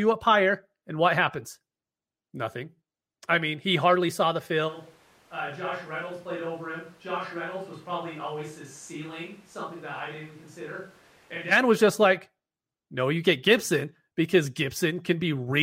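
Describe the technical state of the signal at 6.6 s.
At 6.6 s the speech sits inside a switch to a distant microphone, running from 4.70 to 11.50 s. The sound turns roomy and hollow with thinner bass, drops by roughly 10 dB, and carries room noise only about 25 dB below the speech. The likely cause is the close microphone dropping out, leaving a far pickup such as a camera's. Unlike a plain gain drop or low-pass dulling, the reverberation and background noise rise with the abrupt change.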